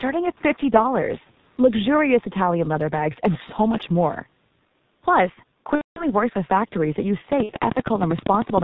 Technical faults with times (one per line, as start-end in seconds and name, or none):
0.00-8.63 G.723.1 codec
5.75-6.06 VoIP packet loss concealed by the speech codec
7.43-7.54 VoIP packet loss concealed by the speech codec